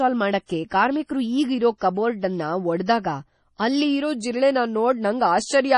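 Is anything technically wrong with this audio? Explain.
Yes. There are two faults.

Throughout the speech, everything above 11.3 kHz is gone. The damage is heavy: a watery, swirling texture and metallic chirps on s sounds. This is likely MP3 compression, which fits a low bitrate around 32 kbps. The encoder cuts the treble and drops weak frequency lines that flicker frame to frame.

Pre-echo appears from 0.46 to 0.49 s and from 3.58 to 3.60 s. A short hiss of about 34 ms and then 22 ms precedes each sharp attack. The codec spreads noise meant for the loud onset across its whole block. The attacks sound soft and smeared.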